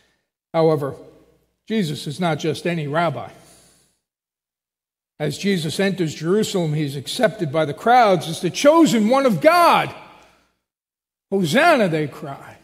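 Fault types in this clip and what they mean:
No faults are audible.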